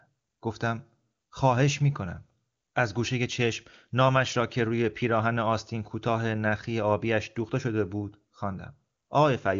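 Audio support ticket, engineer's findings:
Nothing stood out on listening to this speech clip, which comes over the AMR wideband (HD Voice) path at 23.85 kbit/s with content stopping around 7.3 kHz.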